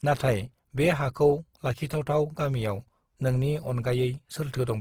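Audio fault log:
throughout, Opus compression: the speech sounds plainly grainy and rough, with a noisy texture over voiced sounds, yet full bandwidth and little swirling. Likely from Opus in its music mode filling bit-starved bands with folded or noise energy, which fits roughly 16 kbps.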